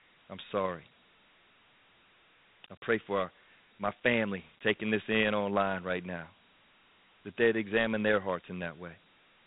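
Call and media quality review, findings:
Dialogic VOX ADPCM, throughout the clip. Speech band stops near 3.9 kHz; gritty hiss rides on the speech, plainly audible. Probable component: telephony storage codec. Coarse 4-bit step-adaptive coding at 8 kHz, consistent with 32 kbps; quantisation noise follows signal level.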